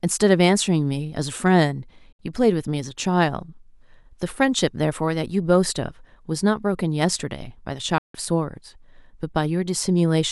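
At 2.12 s the speech drops out for about 64 ms, then again from 7.98 to 8.15 s for about 160 ms. That's a digital broadcast dropout: the receiver lost good frames and muted until clean ones arrived. Each gap fades out in about 3 ms, so it sounds like a sudden hole, not a click. Whatever was said in there is gone, and the lengths fit two and then five lost frames of roughly 32 ms each.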